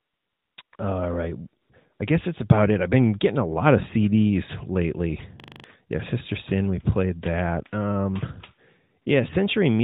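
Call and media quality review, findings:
AMR comfort noise: steady, smooth synthetic hiss replacing the real background, switching in and out at 0.00–0.58, 0.62–0.72, 0.76–0.78, 1.62–1.70, 1.94–2.00 (just before "I guess that's about") and 9.02–9.06 s. The sender flagged silence and stopped speech frames, so the receiver generated noise from a coarse level and spectrum description.

System hang loop: steady buzz at 5.40–5.64 s. A 40 ms section repeats exactly six times at a 25 Hz rate, pointing to a host or driver freeze while the audio hardware kept cycling one ring buffer. About a fifth of a second of audio is lost. The narrowband AMR path underneath carries the sound with light codec coloration.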